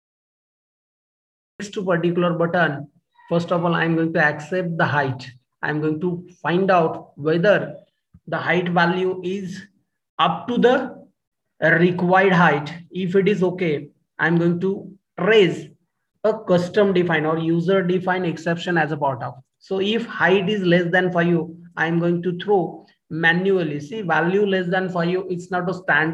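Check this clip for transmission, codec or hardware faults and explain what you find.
There's one fault here, a cut-off start. The first 1.60 s is dead digital silence, then sound jumps in mid-stream with no attack, because capture began after the source was already going.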